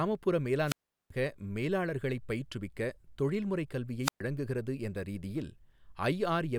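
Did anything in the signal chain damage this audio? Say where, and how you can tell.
Yes. Around 0.65 to 1.11 s and 4.02 to 4.21 s the speech dips into a hiss of static, then falls silent for about 384 ms and 123 ms before returning. That's a wireless microphone squelch dropout: the FM radio link faded, so the receiver muted its output.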